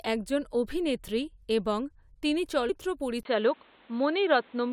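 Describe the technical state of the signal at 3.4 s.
At 3.4 s the speech is band-limited. From 3.23 s to the end, nothing passes above 4.3 kHz, so the sound turns dull. A 20 ms gap precedes it. Faint new noise appears, level unchanged. This is likely an input switched to a poorer device.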